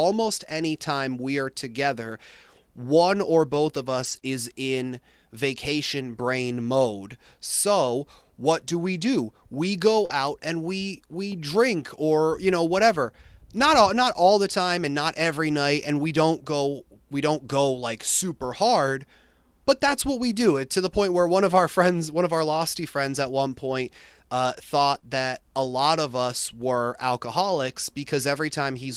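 Around 3.99 to 4.17 s, five lost packets are rebuilt by lost packet rebuilt from error correction. The next packets carried low-bitrate copies, so 100 ms plays without a gap but sounds rougher and noisier. The same rough patch recurs at 4.23 s, just before "is in vacation brain", then from 10.09 to 10.15 s ahead of "and we we drink", and at 24.95 s. Unlike concealment, real sound is present in each of these, only degraded.

Short concealed packet loss falls at 4.19 to 4.23 s, 10.05 to 10.11 s and 24.99 to 25.03 s, the last just before "that a lot of". In each case 20 to 40 ms never arrived, and the decoder extended the preceding sound to fill the hole. This gives a brief smear or wobble where the original sound is missing, rather than roughened.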